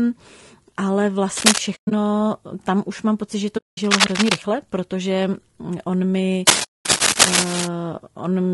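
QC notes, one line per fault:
Throughout: low-delay AAC compression. The speech sounds rough and grainy, with hiss filling the gaps between harmonics and a thin, artificial top end. That's likely AAC-ELD at around 32 kbps, where the short frames can't resolve pitch detail well and bits run out.
1.37–1.58 s, 3.91–4.36 s, 6.47–7.67 s: cable scratch noise. Dense, uneven scratchy rustling sits over the speech, about 5 dB above it in the first and last bursts and roughly level with it in the middle one, which ends just before "protože on mi". It's likely a worn cable or connector being moved, its contact resistance jumping around.
1.75–1.92 s, 3.57–3.78 s, 6.63–6.87 s: AAC frame loss with muting. Soft-edged dropouts. The first is broken up, with about 140 ms missing across 160 ms and the longest gap near 100 ms. The second, 200 ms long, comes right after "už mám pocit že". The third, 220 ms, follows "protože on mi". 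The decoder zeroes missing frames and the overlapping windows fade the sound out and back in.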